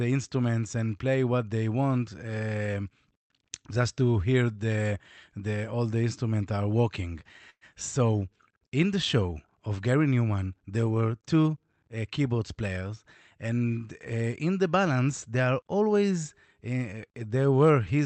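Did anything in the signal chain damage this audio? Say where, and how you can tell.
Yes. At 7.50 to 7.64 s there is a call audio freeze, at the network and jitter buffer stage. The speech stops and is replaced by a continuation of the last sound. It fades, and the final 60 ms or so is silent. Then the speech resumes where it left off. Nothing is lost: 113 ms has simply been inserted. The likely cause is delayed packets leaving the jitter buffer empty. Everything afterwards runs 113 ms later.

From 12.28 to 12.90 s there is a jitter buffer speed-up in the call processing stage. The speech plays at 113% of normal speed with no change in pitch, so this stretch sounds rushed. The receiver was holding more audio than it needed. To shrink that backlog, it cut out many short pieces, each one or a few pitch periods long. In total about a tenth of a second was removed.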